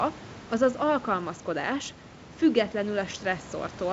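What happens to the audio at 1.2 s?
Nothing goes wrong at 1.2 s: the speech continues intact, with the room noise sitting about 18 dB below it and the G.722 wideband telephone coding leaving nothing above about 7.7 kHz, as it does throughout.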